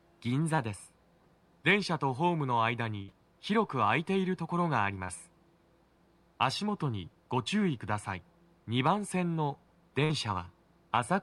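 At 0.55 s there is a short concealed packet loss. About 20 ms of audio never arrived. The receiver filled 25 ms by extending the preceding sound, then blended back. It is heard as a brief smear.

At 3.02 s a burst of packet loss follows. Around 60 ms went missing in a row. The receiver stretched the last sound across 61 ms, fading it as the gap went on. It comes through as a held buzz or fading hiss. The audio then resumes slightly further along.

At 5.04 s a second short concealed packet loss occurs. This gap is longer, about 40 ms lost, with 42 ms filled. The patch lasts long enough to be heard as a wobble. A short sound there may be lost.

At 10.04 s another burst of packet loss removes about 60 ms. Concealment covers 53 ms, decaying as it goes. The same held, fading texture returns. The sound then picks up past the missing stretch.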